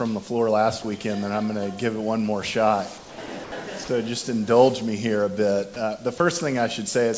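At 0.82–0.84, 2.98–3.18, 3.26–3.28, 3.44–3.52, 3.84–3.88 and 6.18–6.20 s, the sound briefly gives way to steady, featureless noise. This is sound dropped by the voice detector, likely with comfort noise filled in. On a spectrogram, these gaps appear as flat, even noise bands, with a smooth low-level stretch in the waveform. The spectrogram also shows nothing above 8 kHz, consistent with the G.722 call path.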